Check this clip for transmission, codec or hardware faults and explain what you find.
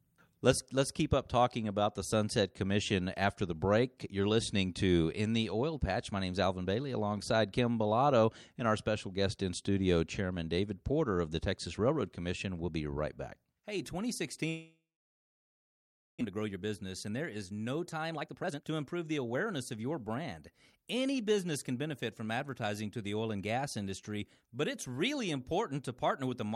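Two transmission faults are audible in this speech clip.

From 14.49 to 16.23 s, the sound trails into a fading buzz, then about 1.4 s of silence, and resumes with about 1 s lost: likely a long network dropout.

From 16.30 to 20.17 s, speech runs hurried at 118% speed with unchanged pitch: a jitter buffer speed-up, trimming around 0.7 s of backlog.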